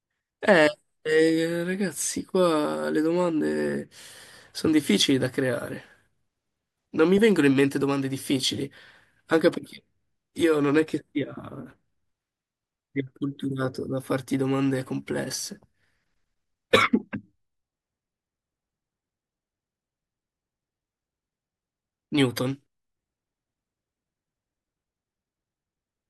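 No technical faults occur at any point in the speech, so there is nothing to describe in time order.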